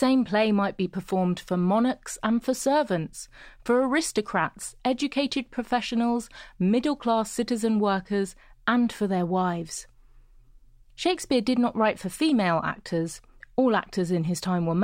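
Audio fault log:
Nothing stood out on listening to this speech recording.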